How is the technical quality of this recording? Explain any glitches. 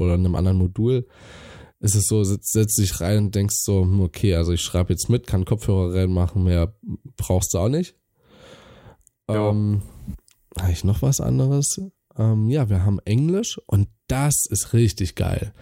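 The speech signal runs continuously from beginning to end with no audible technical glitches.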